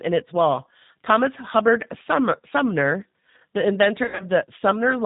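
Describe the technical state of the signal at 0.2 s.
G.729 codec damage is present at 0.2 s and runs through the whole clip. The speech is rebuilt from a vocal tract filter, pitch predictor and sparse pulses, with nothing above 4 kHz, so it sounds band-limited, slightly rough and synthetic, which fits an 8 kbit/s coding rate.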